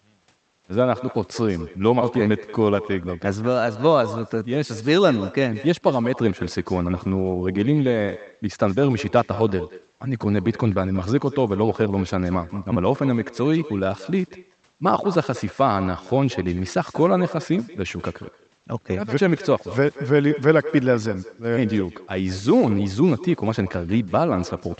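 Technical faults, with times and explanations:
Throughout: echo with no canceller. The far end is playing the call over a loudspeaker, and its microphone sends that sound straight back. Nothing on the path removes it, so every phrase returns after a round-trip delay of roughly a fifth of a second. The returning copy sits about 17 dB below the direct speech. It sounds like a faint, thin shadow trailing each syllable, and the Opus call path carries it back along with the speech.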